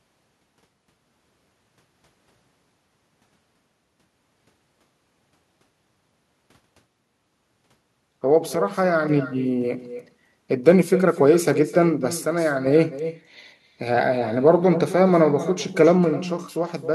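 Echo with no canceller runs throughout: the far end's loudspeaker leaks into its microphone, returning each phrase roughly a third of a second later, about 14 dB quieter. One channel drops out at 8.55–9.09 s, 12.21–12.66 s and from 16.04 s to the end, where the level abruptly falls about 6 dB, likely one stereo side vanishing before the mono sum.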